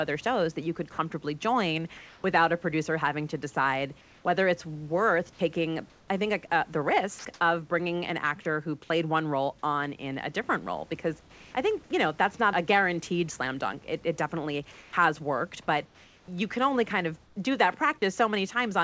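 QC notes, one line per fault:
1.97–2.24 s, comfort noise in place of the background: after "you could comfortably join", 270 ms of room background becomes smooth, featureless hiss at the same level, likely from discontinuous transmission filling the pause.
4.01–7.25 s, sound chopped by the voice detector: after "producer having to decide", about 540 ms of quieter sound drops to synthetic fill, likely because the voice detector kept switching sending on and off.
11.21–11.54 s, comfort noise in place of the background: just before "I think you know", 330 ms of background turns flat and about 4 dB quieter, likely because the sender paused and the receiver generated noise.
14.72–17.36 s, comfort noise in place of the background: across this stretch, 750 ms of the real room background gives way to steady, detail-free noise, likely generated by the receiver while transmission paused.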